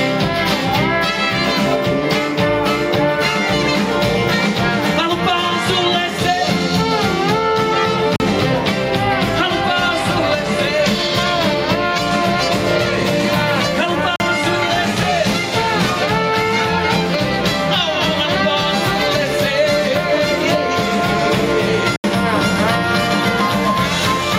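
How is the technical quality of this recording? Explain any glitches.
The recording has two problems: gain pumping that runs through the whole clip, and three short dropouts.

Gain pumping is present throughout. The likely cause is an input gain set too high for the microphone, with a fast limiter or compressor pulling the level down each time something loud arrives. The level swings by around 5 dB. Loud and soft material sit closer together and the sound comes across as squashed.

Blocks of digital silence occur at 8.16 to 8.20 s (40 ms), 14.16 to 14.20 s (40 ms) and 21.96 to 22.04 s (80 ms). Zeros were played in these blocks. That happens when the output buffer was not filled in time, or when a calculation produced invalid numbers. The sound stops abruptly and resumes without any fade. Each block is long enough to be heard as a short hole rather than a tick, and the last one is twice as long as the other two.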